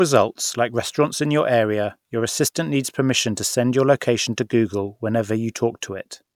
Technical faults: none

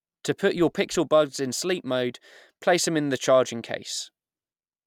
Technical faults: none

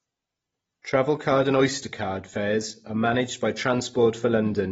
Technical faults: AAC compression; pre-echo

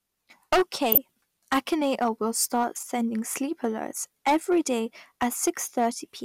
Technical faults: hard clipping; corrupt frame decoded

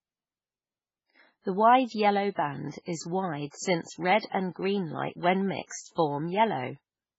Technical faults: MP3 compression

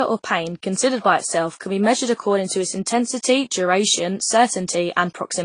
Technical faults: transcoding between lossy codecs

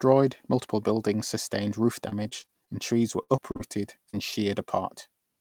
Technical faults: repeated packet loss (robotic sound); short concealed packet loss

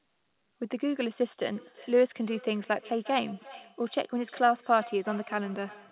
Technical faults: feedback echo between two devices

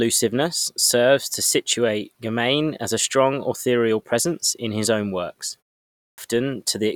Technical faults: clipped start after a pause

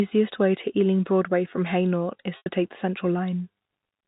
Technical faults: packet loss with pitch repetition

